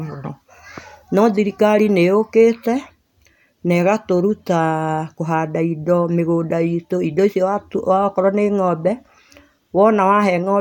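Nothing in the recording stood out as a technical problem on listening.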